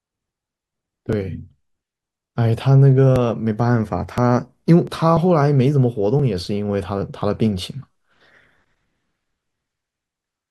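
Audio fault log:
0.12 to 10.24 s: periodic USB or driver dropouts, a tick roughly every 1.02 s as a few milliseconds of audio get skipped, likely a driver stall.
4.85 to 4.88 s: damaged data in a compressed stream, a short glitch where the decoder misreads frames and loses sync.
7.92 to 7.95 s: damaged data in a compressed stream, same kind of glitch as the decoder hunts for the next header.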